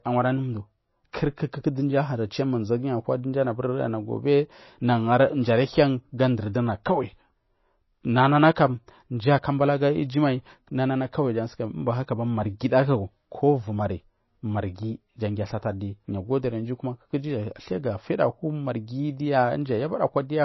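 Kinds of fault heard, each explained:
MP3 compression: The speech was likely passed through an MP3 encoder that was short of bits, at a level of damage that fits a rate around 24 kbps. To save data it discards everything above 5.8 kHz, so the treble stops dead there and sibilants lose their crispness. It also drops weak frequency lines that flicker on and off from frame to frame, leaving a plainly audible watery, swirling texture and smeared onsets throughout.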